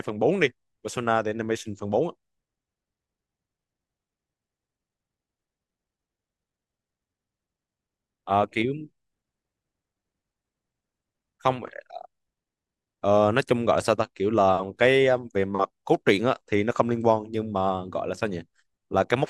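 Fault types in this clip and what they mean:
No faults can be heard in this speech clip. There is nothing here to list by type.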